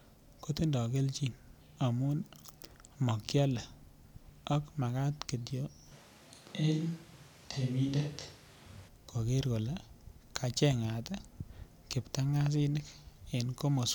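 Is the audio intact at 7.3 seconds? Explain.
No. From 5.93 to 8.87 s the speech turns roomy and hollow, thinner in the bass, with little change in level and a faint noise floor rising beneath it. This is likely a switch to a distant microphone, with the close microphone's signal dropped until it cuts back in.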